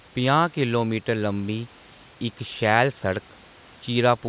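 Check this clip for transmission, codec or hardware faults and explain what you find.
Nothing stood out on listening to this speech clip.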